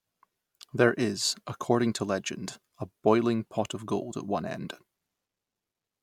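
Speech recording with no technical faults audible anywhere in it.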